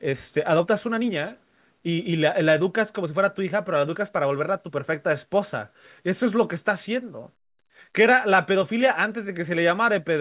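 No technical faults are audible.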